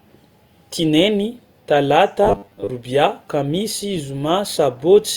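From 2.23 to 2.70 s the speech takes on robotic sound from repeated short buffers. The voice collapses into a rigid, metallic buzz pitched at 100 Hz that still loosely tracks the words. The likely cause is audio arriving too slowly, so playback fills the gaps by looping a stretch of about 10 ms, which fits the 100 Hz tone. Roughly half of the material in this span is repeats, with the real audio skipped.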